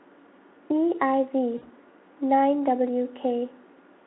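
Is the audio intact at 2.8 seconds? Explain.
Yes, the speech at 2.8 seconds is intact, with no fault at that moment.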